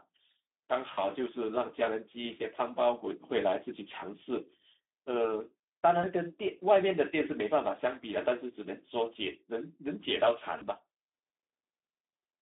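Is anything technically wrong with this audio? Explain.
Yes. Speex codec damage runs throughout. Starved excitation makes the speech hoarse and noisy, and the spectrogram shows energy held between 250 Hz and 3.6 kHz.

VoIP packet loss concealed by the speech codec occurs at 0.93 to 1.04 s, 6.01 to 6.07 s and 10.57 to 10.63 s. The decoder extends its last pitch and filter, producing a buzzy tone or coloured noise whose waveform envelope fades.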